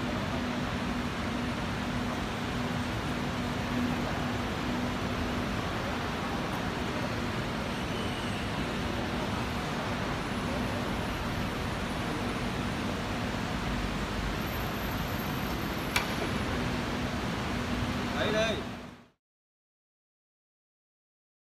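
No technical faults can be heard in this audio. Near the end, a smooth fade-out begins at roughly 18 s and brings the level down evenly to silence by 19.21 s, with no click or hard edge.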